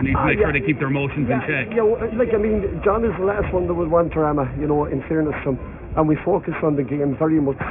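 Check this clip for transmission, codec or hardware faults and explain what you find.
Aliasing is present for the whole clip. The sound was resampled down, which fits a rate near 6 kHz, without an anti-alias filter. Content above 3 kHz folds back to unrelated frequencies, sitting roughly 20 dB below the signal. Bright detail turns gritty and metallic, and energy crowds up against the 3 kHz band edge.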